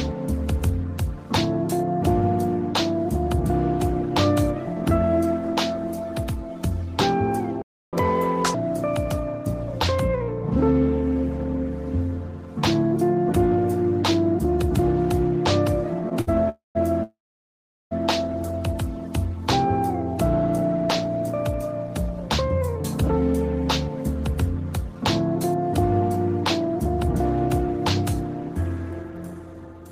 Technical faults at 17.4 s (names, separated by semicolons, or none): call audio freeze